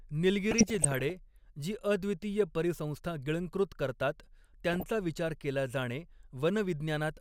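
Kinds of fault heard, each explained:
DAB burbling: under weak reception, bit errors slipped past error correction into the MP2 data, corrupting samples so single sub-bands carried short blips of noise. The speech burbles from 0.51 to 1.1 s, and briefly at 4.71–4.83 s, before "विचार केला जाणे".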